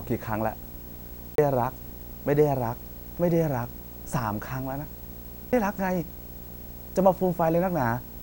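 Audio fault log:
Throughout: video or display buzz. A screen or video cable is coupling into the audio, giving a steady buzz at the 59.94 Hz field rate with hash stacked above it, plus a thin, very high whine at 15.7 kHz from the line scan. It sits at roughly 20 dB below the speech. On a spectrogram this shows as a comb of harmonics spaced 59.94 Hz apart running the full length, and a single bright horizontal line near 15.7 kHz.
1.35 to 1.38 s and 5.52 s: CD skip. The laser jumped to another turn of the disc's spiral, so the player muted briefly and resumed from a different point. The speech jumps abruptly, with a short gap at each break, the first gap lasting about 30 ms and the second only a few milliseconds. In the waveform there is a flat or near-silent gap with hard edges and mismatched wave shapes on either side. The spectrogram shows a thin vertical broadband line where the content breaks off.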